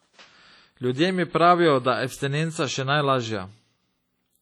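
From start to finish, a transform codec has quantised the speech far too coarsely, likely WMA compression at a setting that fits a low bitrate near 32 kbps. The damage is heavy: noise smears across each long block, weak spectral detail vanishes, and a washy, ringing hiss breathes with the signal.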